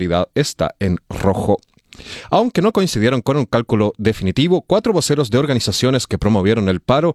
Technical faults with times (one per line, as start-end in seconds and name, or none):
none